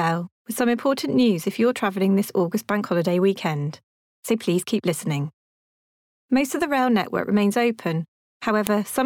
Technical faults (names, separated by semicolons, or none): file header played as audio